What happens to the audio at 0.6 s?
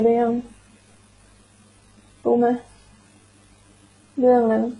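At 0.6 s the speech carries the same degradation heard across the whole recording: nothing above 11 kHz, with the artefacts of more than one codec heard together. That mix likely comes from transcoding between lossy codecs. A very low-rate HE-AAC stage, around 12 kbit/s, would have thinned the detail first. A later WMA pass at roughly 96 kbit/s would then have spent its bits re-encoding those flaws while adding its own.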